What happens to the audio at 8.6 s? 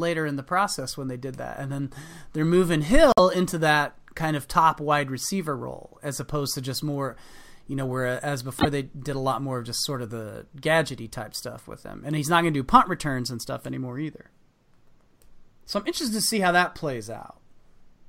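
A likely broken MP3 bit reservoir: frames cut from the stream leave the next ~26 ms frames reading another frame's bytes, so between 8.58 and 8.66 s, after "you know where as" and before "they did a lot", the speech jumps ahead through a brief corrupted stretch.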